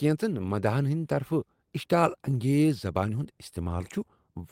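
Lost packets rebuilt from error correction occur at 0.37 to 0.51 s, just before "مداحن ہندِ", and at 3.17 to 3.23 s, after "اشتعال انگیز زبانہ". The decoder filled each loss with the low-bitrate copy carried by the next packet, so the speech runs on without a gap, but those stretches sound rougher and noisier.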